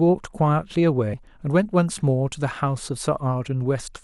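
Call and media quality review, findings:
Brief digital blip at 1.14 s in speech. Damaged data in a compressed stream: corrupted frame misread by decoder, which loses sync and resyncs on next frame header.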